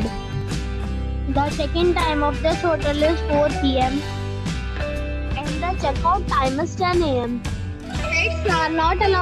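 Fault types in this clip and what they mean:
No technical faults can be heard anywhere in this audio. Nothing stands out as a defect to describe.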